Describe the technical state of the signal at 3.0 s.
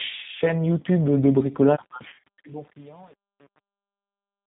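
At 3.0 s the fading speech sounds gritty, with truncation distortion on a fade running from 1.79 s to the end and worst from 1.93 s. The volume stage drops low bits without dither, which fits an 8-bit path, so the falling waveform collapses into coarse steps. Underneath, the speech is band-limited, rough and synthetic. That is the G.729 codec, whose narrowband pulse-based rebuilding fits 8 kbit/s and passes nothing above 4 kHz.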